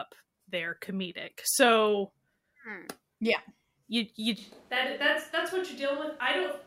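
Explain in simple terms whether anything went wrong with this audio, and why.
A switch to a distant microphone happens at 4.38 s and lasts to the end. The voice suddenly turns roomy, hollow and thin, noticeably quieter, with room noise audible behind it, likely because the close microphone dropped out and a farther one took over.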